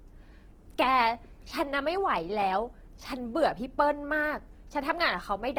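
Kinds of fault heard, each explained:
Opus compression: The speech throughout has a rough, grainy texture, with harmonics turned partly to noise. This is likely Opus in its music (CELT) mode at a low bitrate, around 16 kbps, keeping each band's energy but filling starved bands with folded or noise content. On a spectrogram, energy reaches up to about 20.2 kHz with few gaps, but upper harmonics look smeared and speckled instead of cleanly striped. The waveform shows nothing unusual.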